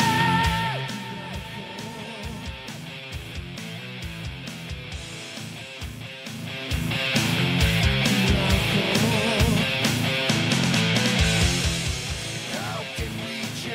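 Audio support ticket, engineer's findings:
Zipper noise, 6.27–7.08 s. Ticking rides on the sound while the level moves about 15 dB in 1 dB steps, around twenty a second. Probable component: a gain stage updating per buffer without smoothing. Each abrupt step clicks.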